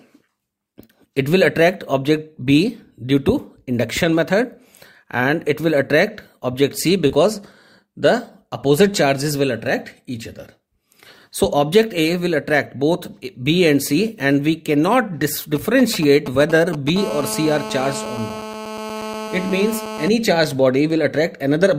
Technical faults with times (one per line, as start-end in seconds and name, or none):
0.85-0.91 short concealed packet loss
7.07-7.11 short concealed packet loss
15.56-16.90 GSM signalling bursts
16.96-20.08 GSM phone buzz
19.23-19.30 short concealed packet loss